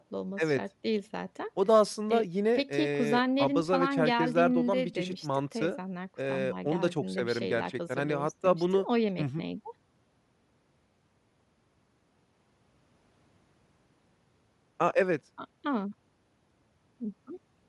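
Bluetooth LC3 compression runs through the whole speech clip: upper frequencies sound thinned and replaced by noise, giving a breathy, grainy edge. This is likely LE Audio's transform codec at a modest rate, which fits roughly 48 kbps with 10 ms frames.

Lost LE Audio frames occur at 4.94 s, 11.29 s and 14.90 s, each about 10 ms long. With each frame missing, the decoder repeats the previous spectrum with scrambled signs, so each gap becomes a brief noisy smear.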